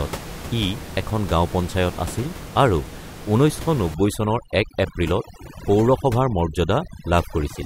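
From 3.94 s to the end, the background collapses into near silence dotted with twinkling specks. That is overdone noise removal: a noise reducer set too hard, cutting individual frequency bands near its noise estimate, including the room noise sitting about 14 dB below the speech, and quieter parts of the voice with them.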